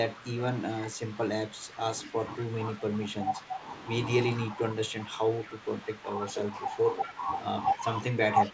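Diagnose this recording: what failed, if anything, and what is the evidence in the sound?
Speech suppressed in double talk, likely in the call's echo-cancellation stage: the level dips by up to about 10 dB and thins or breaks up at 0.14–0.26 s, 0.9–2.16 s, 2.75–3.62 s and from 4.57 s to the end. These are gain ducks, not the silent gaps of packet loss.

Echo leak, likely from the far end's loudspeaker pickup slipping past its canceller: a faint copy, about 20 to 25 dB below the speech, trails at a fixed 219 ms delay at 2.07–2.43 s, 5.44–5.48 s, 7.03–7.12 s and 8.43–8.5 s. That constant delay separates it from room reverberation.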